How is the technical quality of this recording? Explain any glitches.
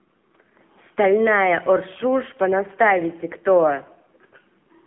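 Technical quality is limited by one fault present from start to finish: AMR narrowband mobile codec coding. The speech sounds like a phone call, thin and boxy, with clearly audible codec damage in the form of a buzzy, synthetic edge.

Throughout, the audio sits in a telephone band of roughly 200 Hz to 3.4 kHz. The codec rebuilds the voice from a vocal-tract model fed with sparse pulses, and the harshness points to a low mode near 7.4 kbit/s. On a spectrogram, the energy stops at a hard ceiling around 3.5 kHz, with empty space above it.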